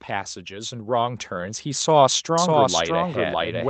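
An automatic gain control, finding the input of this speech recording too quiet, raised its gain steadily from 0.08 s to 1.96 s, by about 7 dB in total, so the voice and the background noise swell together over nearly two seconds. From 2.38 s to the end, a doubled audio track appears. The likely cause is a second capture path or an edit adding a copy of the same audio, here running about 0.7 s behind. The copy is roughly as loud as the original, full-band and dry with no room colour, and it cuts in abruptly.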